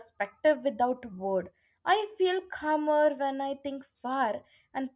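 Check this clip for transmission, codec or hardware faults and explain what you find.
No faults found in this clip.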